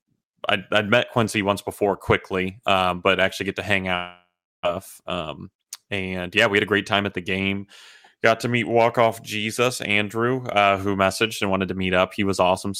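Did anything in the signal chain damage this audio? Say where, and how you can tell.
Yes. At the network stage, most likely a long network dropout, packets stopped arriving just after "actually get to hang", at 3.95 s, and the receiver concealed the gap until 4.67 s. It stretched the last sound into a fading buzz, which gives way to about 0.35 s of silence. When the stream resumes, roughly 0.4 s of the original audio is simply gone, so the speech jumps ahead. The playout delay also grew by about a third of a second.

In the jitter buffer, a speed-up follows from 5.01 to 7.21 s. After the dropout the buffer was holding more audio than its target, so the receiver drained the excess by repeatedly cutting out short pitch-period-sized slices. Speech runs about 112% of normal speed with the pitch unchanged, so it sounds hurried but not higher. Over the whole stretch, roughly a third of a second of audio is trimmed away to pull the delay back down.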